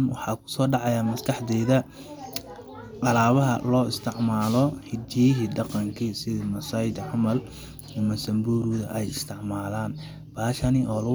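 No technical faults can be heard anywhere in the speech. Nothing in the recording calls for a timestamp or a closer listen.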